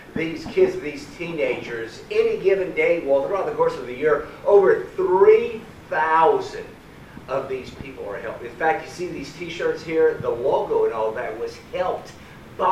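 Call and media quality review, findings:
Drift correction step, 11.36 to 12.66 s: sound abruptly plays about 5.5% fast and sharp by roughly 92 cents, near a semitone, then snaps back. Likely a clock-sync resampler stepping its rate to rebalance a buffer. Unlike wow, speed and pitch change in one clean step, not a slow wobble.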